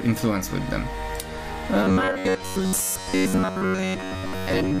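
From 1.84 s right through to the end at 4.8 s, the sound goes robotic from repeated short buffers. It turns into a stiff, metallic buzz pitched at about 93.8 Hz that only loosely tracks the original. That pitch points to a chunk of roughly 10.7 ms being replayed over and over. Fresh audio is likely arriving too slowly, so the player loops the last buffer while most of the real material, something like two-thirds or more, gets skipped.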